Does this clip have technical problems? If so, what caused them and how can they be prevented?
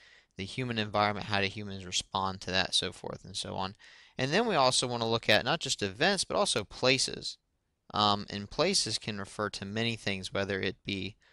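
No, no technical problems here.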